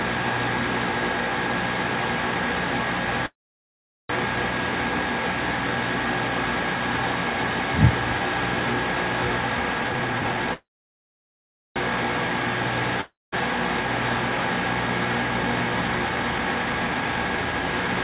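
At 3.26 s a call audio freeze sets in. The last sound trails off as a brief fading buzz, then about 0.78 s of silence follows until 4.11 s. The likely cause is packets held up in transit while the jitter buffer ran dry. Unlike a dropout, nothing is lost: the audio resumes exactly where it stopped, only later.

From 9.84 to 10.53 s a jitter buffer speed-up plays the sound at 172% speed with unchanged pitch, trimming roughly half a second. This differs from a codec glitch because the pitch stays put while the pacing rushes. A second freeze follows immediately, from 10.53 to 11.78 s, with about 1.13 s of silence, and again the audio picks up with nothing missing.

At 13.01 s comes a long network dropout lasting to 13.42 s. A short fading tail gives way to about 0.21 s of silence. The likely cause is audio that never arrived, so unlike the freezes, about 0.32 s is absent when the sound returns further on.

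From 15.43 to 18.02 s a milder speed-up at 114% removes roughly 0.4 s, and the sound feels hurried rather than interrupted.

Throughout, nothing above 4 kHz is present, which fits G.711 A-law at 64 kbps.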